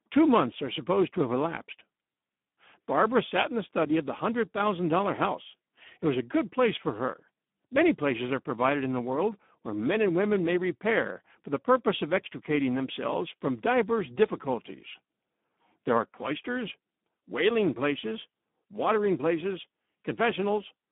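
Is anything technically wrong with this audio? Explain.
Yes. The whole clip carries Speex codec damage. This CELP speech codec has too few bits for the excitation here, which fits a setting around 8 kbps. Speech sounds hoarse and noisy. The band sits near 200 Hz to 3.6 kHz, with nothing above 3.8 kHz.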